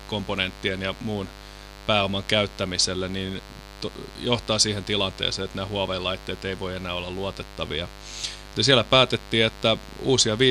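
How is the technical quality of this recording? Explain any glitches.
Technical quality is compromised by one persistent fault. Mains buzz runs throughout: 50 Hz switching spikes leak in, giving a raspy buzz about 20 dB below the speech, seen as evenly stacked harmonic lines into the kilohertz range.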